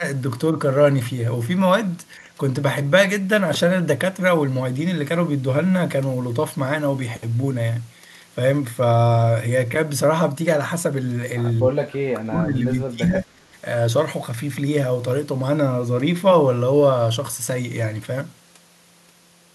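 Speech suppressed in double talk occurs at 0.00 to 0.04 s (about 10 dB dip), 11.62 to 12.65 s (about 25 dB) and 12.84 to 13.48 s (about 30 dB). Each time the level drops, which is likely an echo canceller attenuating this talker while the far end speaks.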